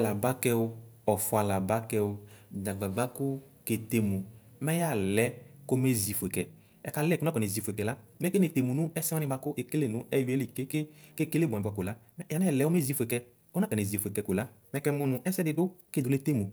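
From 5.99 s, right after "mɛ yalɛ kɔme", the speech suddenly turns rushed, running 1.48 times faster to the end with its pitch unchanged. This time-stretched section likely comes from software squeezing the audio to fit a length, dropping short pieces to hold pitch.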